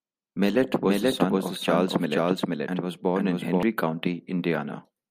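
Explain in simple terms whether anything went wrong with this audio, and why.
A doubled audio track runs from 0.83 to 3.63 seconds: the same speech plays twice, with a second, equally loud copy trailing about half a second behind. It starts and stops abruptly, likely because the sound was captured again through a slower path.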